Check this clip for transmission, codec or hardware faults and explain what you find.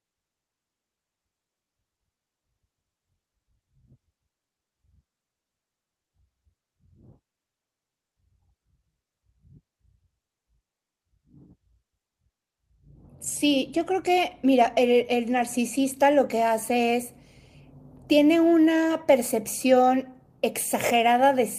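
I hear nothing wrong anywhere in this audio.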